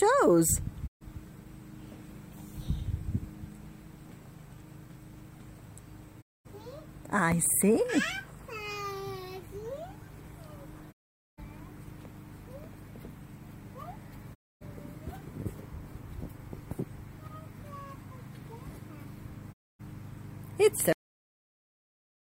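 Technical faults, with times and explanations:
0.86, 6.20, 10.91, 14.33 and 19.52 s: digital broadcast dropout. Each fades out over 20 ms into silence of 128 to 448 ms while the receiver mutes on lost or corrupt frames.
20.93 s: cut-off end. The audio stops mid-sound and falls straight to digital silence with no decay, because the final buffers were never written or played.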